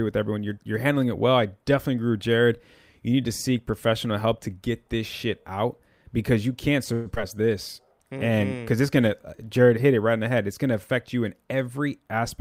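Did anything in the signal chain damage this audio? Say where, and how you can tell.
Yes. After "out because you can't", a call audio freeze runs from 6.93 to 7.07 s. The last sound is stretched into a fading buzz for 121 ms, likely a late-packet stall in the network path.

A skip ahead follows at 7.15 s. About 70 ms of speech vanishes, and the two sides join almost directly. Audio was dropped in transit or by an overflowing jitter buffer.

A jitter buffer slow-down runs from 7.34 to 7.86 s. Speech plays at 90% speed with the same pitch, as repeated pitch periods add 61 ms.

A jitter buffer speed-up runs from 11.54 to 12.17 s, after "gonna affect you in". Speech hurries to 109% speed, with about 70 ms of pitch periods trimmed.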